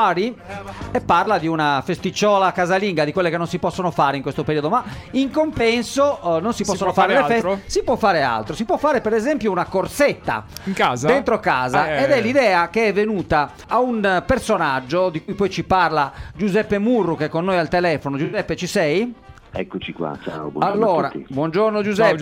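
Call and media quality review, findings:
AAC frame loss with concealment: short smeared, noisy patches at 1.24, 5.57, 15.21–15.31, 18.24–18.39 and 20.70–20.75 s, 21 to 85 ms each, consistent with one to four lost frames. The decoder fills each gap from the last good spectrum.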